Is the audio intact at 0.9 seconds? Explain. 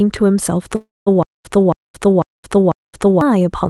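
No. From 0.75 to 1.08 s the sound smears into a fading buzz, then about 0.2 s of silence, before resuming intact. This call audio freeze likely came from delayed packets draining the jitter buffer.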